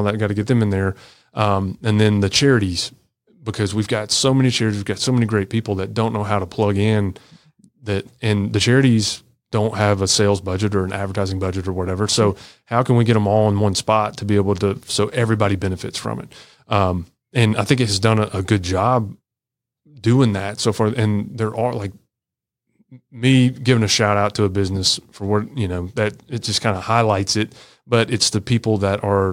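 No technical faults can be heard anywhere in the speech. There is nothing in the audio that needs a timestamp or a second listen.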